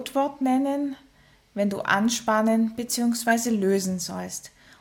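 At 3.28 to 3.32 s a corrupt frame was decoded: damaged bits across about three frames misplace energy, giving a brief blip, seen as a stray spectrogram smear peaking near -15 dBFS.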